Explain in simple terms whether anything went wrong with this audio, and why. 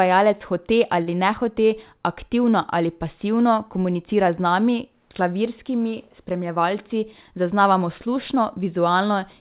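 Two things go wrong in this speech clip, both in how the call connection delivered the audio. That connection also removes everything above 4 kHz, which gives the sound its telephone-like narrowness.

At 1.02 to 1.09 s, just before "nehote aktivno ali pasivno", there is a short stall from a late packet. A chunk of audio arrived late, and the receiver ran out of material to play. Rather than go silent, it stretched the sound it already had by about 48 ms, then carried on from where it left off. Nothing is lost, but that moment is held slightly too long and can sound faintly buzzy or uneven.

From 6.41 to 7.39 s there is a jitter buffer speed-up. The receiver had built up more stored audio than it wanted, which adds delay, so it trimmed many tiny slices out of the sound to catch up. Together these slices come to roughly a twentieth of a second. That stretch plays about 5% faster at the same pitch, so the speech sounds a little hurried.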